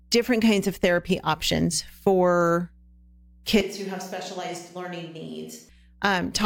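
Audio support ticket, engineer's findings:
Mains hum throughout. Steady 60 Hz tone with low harmonics, about 30 dB below the speech. Probable ground loop or nearby transformer. Power-line current couples into the signal path. Constant for the whole clip.

3.61 to 5.69 s: speech turns roomy and hollow. Thinner bass, level down about 10 dB, room noise about 35 dB below speech. Likely a switch to a distant microphone after the close mic signal was lost. Abrupt in and out.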